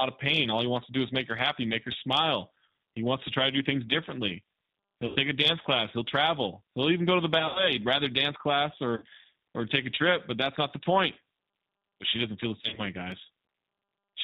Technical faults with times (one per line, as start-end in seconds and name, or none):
0.00-14.24 G.729 codec
5.06-5.18 VoIP packet loss concealed by the speech codec
7.39-7.67 VoIP packet loss concealed by the speech codec
8.96-9.04 VoIP packet loss concealed by the speech codec
12.62-12.82 VoIP packet loss concealed by the speech codec